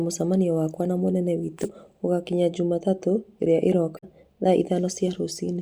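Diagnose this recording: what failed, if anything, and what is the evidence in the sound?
Damaged data in a compressed stream: the decoder misread corrupted frames, causing brief glitches at 1.61–1.65 s, just after "mũcemanio wakwa na mũnene", and at 3.96–4.04 s.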